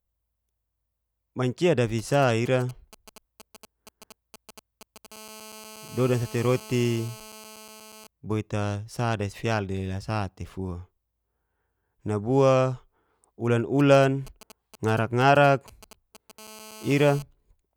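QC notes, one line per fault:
1.99–5.07 s: GSM signalling bursts, a galloping dit-dit-dit of short 217 Hz buzzes about 20 dB down, from a nearby 2G phone's intermittent radio bursts rectified by the audio circuit.
5.12–8.07 s: GSM phone buzz, a hard, raspy 217 Hz buzz rich in harmonics about 21 dB below the speech, as the phone in a call transmits in bursts 217 times a second and the circuit rectifies them.
13.80–16.40 s: GSM signalling bursts, the same galloping pattern of brief 217 Hz buzzes, roughly 20 dB down, from the phone's short signalling transmissions.
16.40–17.22 s: GSM phone buzz, steady raspy 217 Hz buzz about 21 dB below the speech, the phone now in a call and its rectified bursts continuous.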